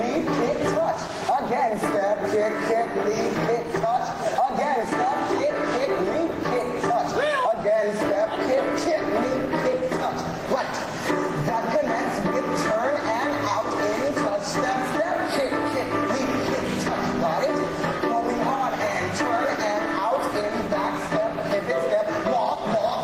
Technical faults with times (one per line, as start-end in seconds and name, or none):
0.00-23.04 gain pumping